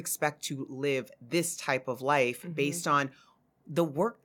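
No technical faults can be heard in the recording.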